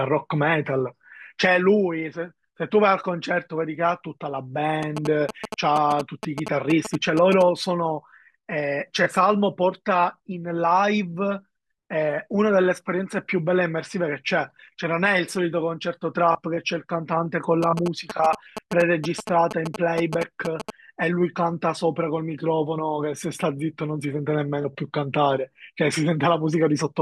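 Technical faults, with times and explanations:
4.83–7.43 s and 17.63–20.70 s, GSM signalling bursts: a nearby 2G phone's sparse radio bursts are rectified by the audio circuitry, giving galloping ticks and short 217 Hz buzzes roughly 5 dB below the speech. A spectrogram shows stacked harmonic lines at 217 Hz multiples; the waveform shows clustered spiky pulse trains.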